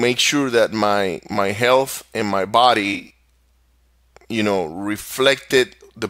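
Just after "my health and my", from 2.93 to 3.11 s, AAC frame loss with concealment leaves smeared, phasey patches where the decoder reused the last good spectrum. Gaps of about 20 ms, consistent with four lost frames, show on a spectrogram as blurred, smeared blocks.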